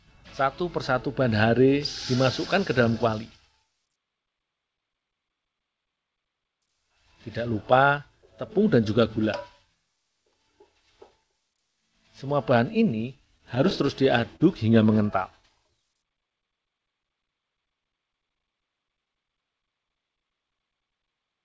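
From 13.38 to 14.42 s the sound suffers repeated stalls, a stutter. Audio arrived late or too slowly, and the buffer kept running dry. Seven times the receiver held the last sound going until more came. Together these fills add up to 96 ms, about 9% of the span. The longest lasts 37 ms. Nothing drops out, but the sound catches and drags.

Next comes a jitter buffer slow-down, from 15.64 to 16.80 s. The buffer ran low, so the receiver repeated single pitch periods and small pause fragments to rebuild its reserve. This adds 98 ms. Playback falls to 92% speed. The pitch stays the same. Sounds are drawn out.

From 18.77 to 19.66 s there is a jitter buffer speed-up. Here the buffer held too much audio, and the receiver trimmed short pieces of one or a few pitch periods to reduce delay. Roughly 70 ms goes. Playback runs at 108% speed with unchanged pitch. The passage sounds hurried. Throughout, the call path passes nothing above 8 kHz, which fits G.722 at 64 kbps.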